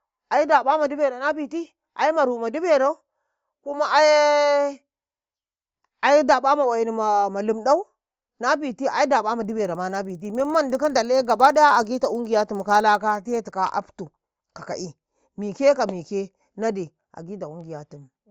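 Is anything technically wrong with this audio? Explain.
Yes. A resampler restarted on every block runs from 9.4 to 13.55 s, just after "nabiti ai ɗaƃa". Each 50 ms block, which fits a 16 kHz to 48 kHz conversion, was processed without its neighbours, leaving edge errors heard as regular ticks at 20 Hz while speech sounds.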